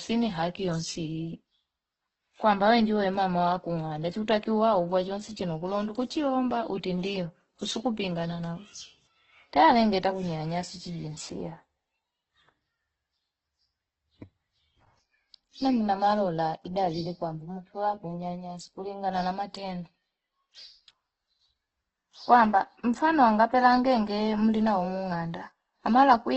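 Throughout, the speech sounds grainy and rough, likely from heavy Opus compression. A spectrogram shows noise-filled bands beneath a flat ceiling at 8.2 kHz.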